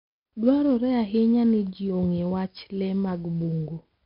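Throughout, 4-bit ADPCM compression codes coarse steps, so gritty hiss tracks loud syllables. Spectrograms show a hard 5.3 kHz ceiling, consistent with about 44 kbps.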